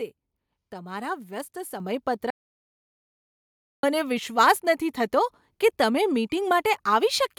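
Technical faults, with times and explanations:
1.8 s, microphone volume stepped up: right after "તમારા વ્યસ્ત" the voice and background jump together by about 7 dB, as the call software raised the input level in one go.
2.30–3.83 s, audio dropout to silence: about 1.5 s of speech vanishes into dead digital silence with no room tone, likely a lost input being written as silence, before "મને વિશ્વાસ નથી થતો".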